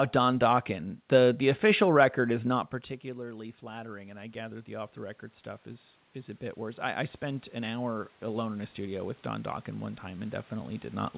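From 2.21 to 9.08 s, automatic gain rising: after the voice drops about 15 dB, the gain control slowly adds about 13 dB, swelling voice and room noise together.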